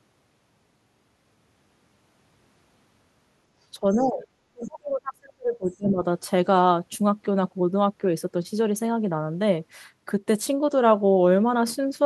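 From 3.8 to 4.26 s the speech dips in patches, adding up to roughly a third of a second, falling by about 20 dB at its deepest. From 4.51 to 6.02 s it is pushed down for about 1.5 s, by about 35 dB at worst. This is speech suppressed in double talk, likely an echo canceller turning the talker down while both sides spoke at once.

Inside those dips, at 3.92 to 4.03 s and again at 4.65 to 4.71 s, a faint, brief second voice comes through, about 25 dB and then about 35 dB below the speech. This is the other side's voice leaking through, likely loudspeaker echo the canceller failed to fully remove.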